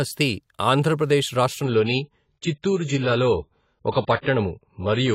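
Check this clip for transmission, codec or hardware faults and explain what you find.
One fault is present. From 1.64 s to the end, the speech plays from an adaptive stream at a lower bitrate. The player switched to a cheaper encoding of the same audio when the connection slowed. The change is abrupt, with no gap. Treble vanishes, with nothing above 7.6 kHz, and the voice turns dull and watery, with swirling codec artefacts. This fits a drop from 96 to 16 kbit/s AAC.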